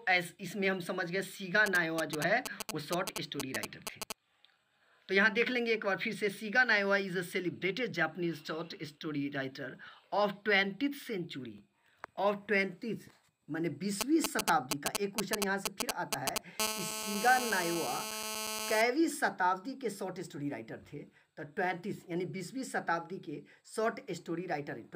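From 1.66 to 4.12 s and again from 14.01 to 16.60 s, GSM signalling bursts from a nearby 2G phone are picked up and rectified by the audio circuit. They sound like a galloping dit-dit-dit of short 217 Hz buzzes, about as loud as the signal in the first stretch and somewhat louder in the second. On a spectrogram they show as short groups of stacked harmonic lines at multiples of 217 Hz, and on the waveform as clustered pulse trains.

At 16.60 s a nearby phone is in a call, and from then until 18.82 s there is a GSM phone buzz. Its transmissions now arrive steadily, 217 times a second, giving a hard, raspy 217 Hz buzz at about 4 dB below the signal. A spectrogram shows a continuous comb of horizontal harmonic lines, and the waveform carries a regular pulse pattern.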